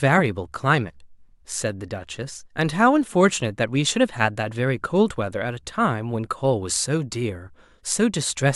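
No technical faults heard anywhere in this speech recording; nothing to log.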